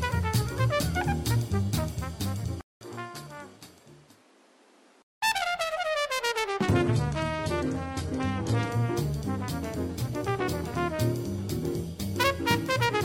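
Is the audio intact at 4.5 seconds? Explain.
No. From 2.61 to 5.22 s the input likely switched to a poorer device: after a 0.2 s gap the sound narrows, the spectrogram shows nothing above 13 kHz, and a new noise floor appears about 30 dB below the signal.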